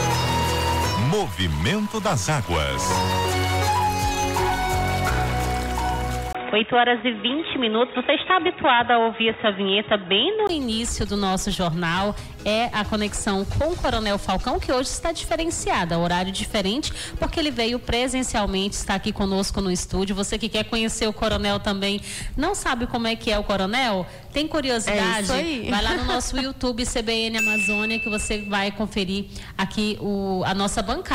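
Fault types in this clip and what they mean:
Input switched to a poorer device: From 6.33 to 10.49 s the sound turns dull and boxy, with nothing above 3.8 kHz. A 20 ms gap marks the change. Level shifts by about 5 dB, over a faint new noise floor. A lower-grade microphone likely took over.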